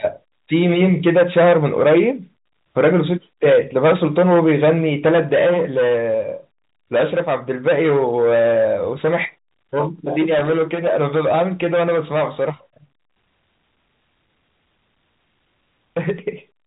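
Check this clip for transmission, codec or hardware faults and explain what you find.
One hardware fault stands out, a short burst of loose connector crackle, heard over a telephone-band channel that sounds like G.711 A-law, with nothing above about 3.8 kHz.

From 10.38 to 10.50 s, roughly a tenth of a second, there's loose connector crackle. A worn or dirty contact is making and breaking as something shifts, chopping the speech, so you hear an irregular scratchy burst.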